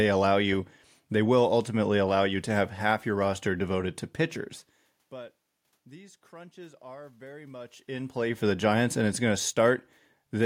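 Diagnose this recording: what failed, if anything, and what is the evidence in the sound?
Nothing in the recording points to a failure at any stage of the chain. A room background sits under the speech throughout, and the level shifts around the middle and again later on sound like the talker moving relative to the microphone.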